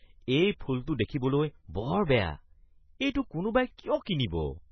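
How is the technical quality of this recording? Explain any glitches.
The technical quality is poor. Heavy compression damage runs through the whole speech clip, and there is one pre-echo at 4.05 s.

MP3 compression: Throughout, nothing is present above 6 kHz, and the remaining sound is watery and swirly, with metallic chirps on s sounds. This is likely heavy MP3 encoding at a very low rate, which fits about 16 kbps. Short of bits, the encoder cut the treble at a fixed frequency and dropped weak frequency lines, so they flicker on and off from frame to frame. On a spectrogram this shows as a hard ceiling at 6 kHz and scattered, blinking islands of energy below it.

Pre-echo: At 4.05 s a sharp attack is preceded by a brief hiss spread over about 13 ms, and the onset sounds soft and smeared. The codec spread its quantisation noise evenly across a transform block. Because the attack fell late in the block, noise sized for the loud part leaked into the quiet moment before it. 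On a waveform, a faint fuzzy smear appears just ahead of the transient. On a spectrogram, a thin broadband haze precedes the onset.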